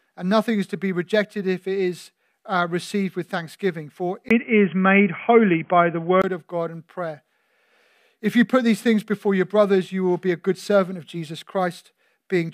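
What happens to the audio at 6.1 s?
At 6.1 s the audio is near the end of a dull, boxy stretch from 4.29 to 6.24 s, likely an input switched to a poorer device. Nothing passes above 3.3 kHz, the level shifts by about 5 dB, and a new noise floor sits roughly 40 dB down. On a spectrogram the top band is sharply cut off. The waveform shows a short gap at the switch and a step in level.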